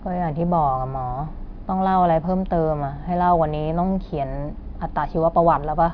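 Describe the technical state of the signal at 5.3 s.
At 5.3 s the speech signal is intact, with no technical fault audible at that moment.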